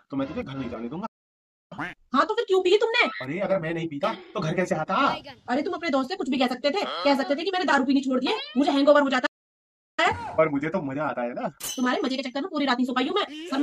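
At 1.06 s the sound cuts out mid-flow and stays silent until 1.72 s, a gap of about 0.65 s. This is a playback stall. The likely cause is the player running short of buffered data or its output thread being held up, so nothing reached the output until it recovered. The sound then resumes.

From 1.72 s to 4.72 s the audio runs hurried, at about 1.1 times normal speed, with its pitch unchanged. This is time-compressed catch-up. The player is working off the backlog built up during the silence by dropping short slices and cross-fading across the joins.

A second playback stall opens at 9.26 s and lasts until 9.99 s, about 0.72 s of silence. Again the likely cause is a starved buffer or a blocked playback thread. Time-compressed catch-up follows from 9.99 s to 12.99 s, this time at about 1.15 times speed. The pitch again stays put, but the pace is pushed harder than after the first dropout.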